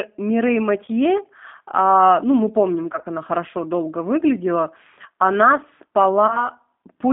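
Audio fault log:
Throughout: G.729 codec. The speech is clearly rough and a bit synthetic, squeezed into a phone band of roughly 250 Hz to 3.6 kHz. At 8 kbit/s the decoder is rebuilding the voice from a filter, a pitch guess and a few pulses per frame, and that model is what you're hearing.
0.86–0.89, 2.93–3.06 and 6.27–6.49: VoIP packet loss concealed by the speech codec. Missing frames were patched by stretching the last pitch and filter with falling gain, giving brief fading smears. The middle one is patchy, about 40 ms lost in short gaps over roughly 120 ms, and the voice stays thin just after each.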